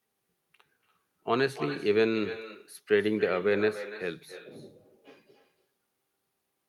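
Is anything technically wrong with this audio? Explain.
Yes. Throughout the speech there is echo with no canceller: the far end plays the call over a loudspeaker, its microphone picks the sound back up, and nothing subtracts it, so each phrase returns after the network round trip, roughly 300 ms late and about 14 dB quieter, sounding thinner. Unlike ordinary room reverberation, which smears into a smooth decaying tail, this is a distinct, delayed repeat that trails each phrase.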